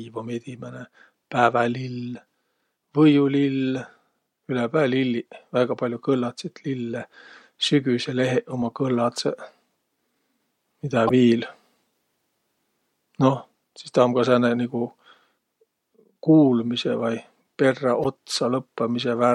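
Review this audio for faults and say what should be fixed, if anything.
Damaged data in a compressed stream at 11.07–11.11 s and 18.03–18.06 s: corrupted bytes make the decoder lose frame sync, producing brief blips in the speech. Fix this by transferring and storing the file with checksums and re-fetching any segment that fails verification.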